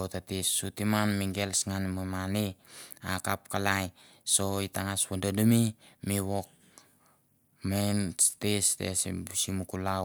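Nothing goes wrong anywhere in this recording; there's no technical fault to point to at any moment.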